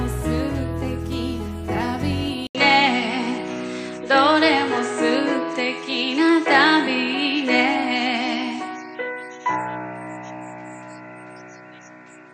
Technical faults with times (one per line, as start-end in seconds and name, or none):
2.47-12.33 input switched to a poorer device